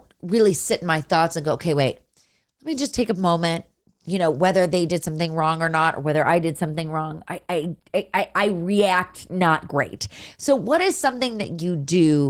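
From start to finish the speech carries Opus voice compression, and the damage is plainly audible: the voice sounds slightly hoarse and synthetic, with a muffled quality. The sound points to a low bitrate around 16 kbps in hybrid mode, where a linear-prediction coder handles the band below 8 kHz and a coarser transform layer fills in above it. A spectrogram would show blurred harmonics and patchy, blocky energy above 8 kHz, changing in steps that fit 20 ms frames.

From 6.00 to 9.97 s, channel delay (comb filtering) adds a thin, slightly phasey dullness to the top of the voice. One channel trails the other by only a few samples, a very small fraction of a millisecond, and when the two are summed the shared signal cancels at regularly spaced frequencies, the first near 7 kHz. On a spectrogram this appears as a fixed dark band around 7 kHz for exactly that span, starting and stopping abruptly.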